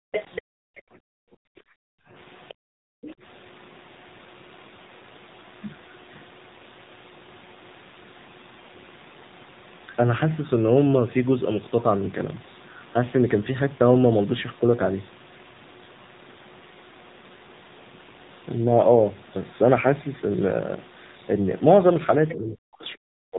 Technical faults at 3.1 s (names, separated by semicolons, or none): AMR narrowband mobile codec; other side's voice leaking through